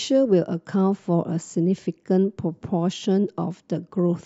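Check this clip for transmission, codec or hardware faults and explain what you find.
Nothing turned up here, so there's nothing to flag in the transmission, the encoding or the hardware.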